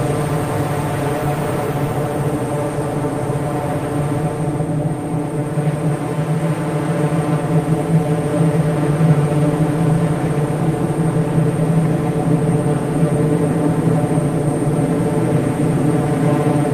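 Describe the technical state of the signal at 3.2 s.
The signal at 3.2 s is intact, with no audible technical fault at that moment.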